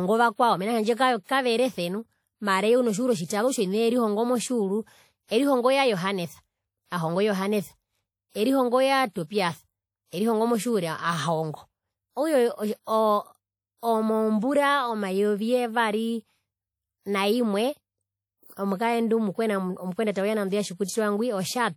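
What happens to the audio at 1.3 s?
A short pre-echo runs from 1.23 to 1.29 s, just before "kaverese nu mara eye". The attack's coding noise smears about 54 ms backward as a short hiss. Throughout, the speech sounds washy and ringing, with hiss that breathes with the signal. Likely WMA compression at a low bitrate, around 48 kbps, is the cause.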